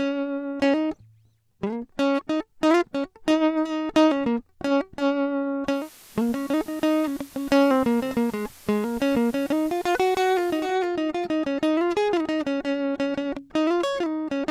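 Music, with digital radio blending to analogue from 5.65 to 10.76 s: a 241 ms cross-fade to FM brings hiss roughly 25 dB down and a level shift of about 2 dB.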